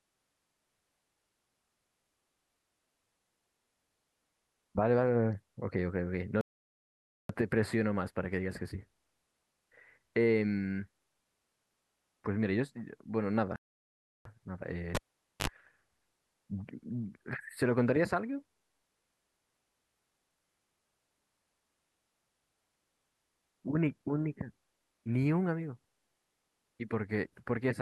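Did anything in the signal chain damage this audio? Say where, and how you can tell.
Yes. The speech cuts to silence at 6.41 to 7.29 s (0.88 s) and 13.56 to 14.25 s (0.69 s), a playback stall, likely a starved buffer.

At 14.95 s a pop, about 0.48 s of near-silence, a 57 ms burst of 50 Hz mains buzz, then a pop at 15.48 s: the cable was pulled and plugged in.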